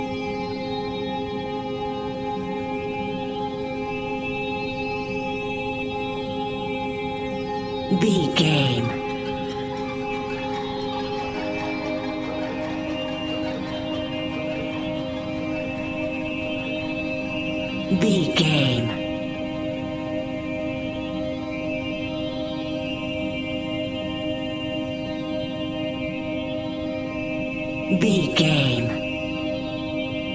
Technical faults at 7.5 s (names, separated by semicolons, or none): none